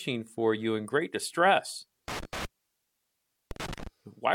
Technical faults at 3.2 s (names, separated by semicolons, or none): intermittent contact